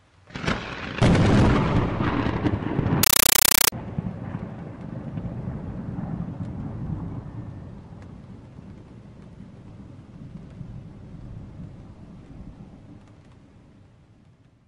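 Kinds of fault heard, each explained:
Compressed stream played as audio, 3.03 to 3.72 s: a Dolby Digital (AC-3) bitstream reaches the output as if it were ordinary PCM samples and is never decoded. Each coded frame plays as a 9.33 ms burst of noise followed by digital silence, repeating 31.25 times a second. The result is a harsh, loud chattering static that replaces the sound for that stretch, and its density fits a 448 kbps stream.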